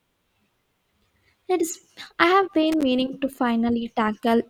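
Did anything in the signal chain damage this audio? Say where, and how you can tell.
Yes, in the analogue wiring. From 2.72 to 2.83 s the speech is hit by a short, ragged burst of crackle and scratching, about a tenth of a second long, that doesn't belong to the sound itself. That's loose connector crackle: a worn or dirty contact somewhere in a cable or jack was making and breaking as it moved, chopping the signal on and off, and the irregular clicks come from those rapid interruptions.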